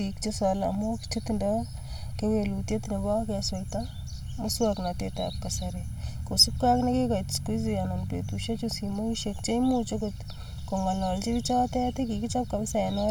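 Speech throughout has a hollow, phasey quality from channel delay (comb filtering). One channel arrives roughly one and a half milliseconds late, and when the two are summed to mono the shared signal cancels at fixed, evenly spaced notches starting around 400 Hz.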